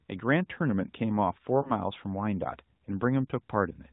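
Around 1.62 to 1.73 s there's a lost AMR speech frame, most likely just one 20 ms frame failing its radio checksum. The decoder patched the gap by reusing the last good pitch and vocal tract settings at lower gain, so you hear a quick dip or warble before things recover. It all sits inside the usual AMR-NB narrowband band limit, nothing above 4 kHz, with only light codec colouring that fits the 12.2 kbps mode.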